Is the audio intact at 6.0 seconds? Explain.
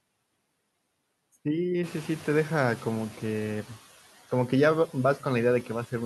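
No. At 6.0 seconds, as throughout the clip, noise suppressor artifacts are present. The suppressor pulls down each frequency band it judges to be steady noise, frame by frame, by about 18 dB. That matters here because the room noise stepped up from about two seconds on. What remains sinks between phrases and swells under the speech. A noise gate would instead switch the whole signal on and off.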